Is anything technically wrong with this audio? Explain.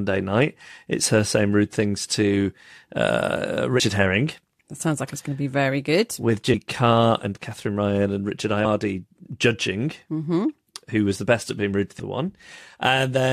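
Yes. Damaged data in the compressed stream causes brief glitches at 3.79 s after "rude things to uh", 6.53 s, 8.64–8.66 s, and 11.98 s after "the best at being". Corrupted frames make the decoder lose sync and hunt for the next header, leaving short disruptions.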